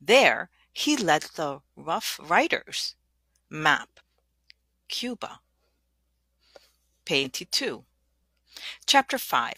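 At 3.95–4.01 s and again at 7.20–7.27 s, damaged data in the compressed stream produces brief glitches of about 55 and 65 ms as the decoder misreads corrupted frames and hunts for the next header.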